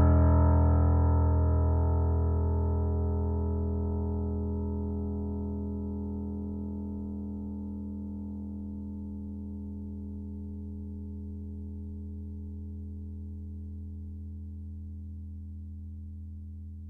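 Nothing in this music clip stands out as a technical fault; it's simply the music, with no audible problems from beginning to end.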